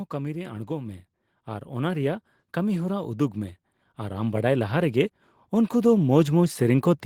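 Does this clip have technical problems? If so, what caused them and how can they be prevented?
Yes: automatic gain rising from 0.1 s to the end lifts voice and background together, unlike a speaker moving closer. Fixing the input gain and disabling AGC prevents it.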